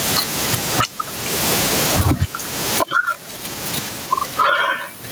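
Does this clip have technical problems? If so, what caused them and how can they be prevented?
Yes, there's gain pumping all the way through this speech, with the gain swinging roughly 25 dB; the room noise sits about 44 dB under the voice. It's likely input gain cranked way too high, with a fast limiter clamping down. Set the preamp gain properly so the limiter isn't constantly working.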